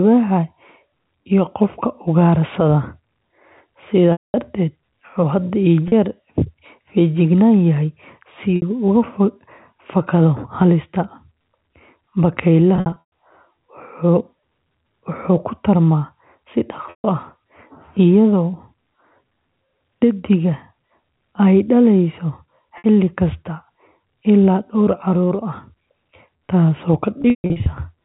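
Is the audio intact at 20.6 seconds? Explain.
Yes, the speech at 20.6 seconds is intact, carried cleanly through the G.711 telephone coding with its usual 4 kHz upper limit and no fault at that moment.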